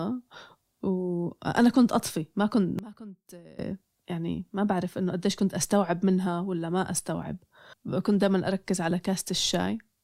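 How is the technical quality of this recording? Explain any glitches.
One glitch stands out. Between 2.79 s and 3.59 s the speech abruptly falls by about 20 dB before recovering. The likely cause is one channel inverted: with one side's polarity reversed, the shared centre content cancels in a mono sum, leaving only the faint difference between channels.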